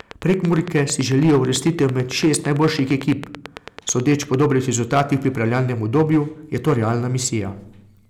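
It's a speech recording, and the whole thing is hard clipped: the level runs about 9 dB past what the chain can pass, so a few percent of the samples get sheared flat at the ceiling. Those squared-off peaks throw harmonics high up the spectrum, which you hear as a gritty crackle on the louder syllables. On top of that, from the very start to 4.35 s there's a train of clicks, around forty sharp ticks at a steady pace of about 9 per second, poking out roughly 10 dB above the speech and audible in the gaps too. The regular, same-shaped pulses most likely come from electrical interference or a faulty connection or power supply.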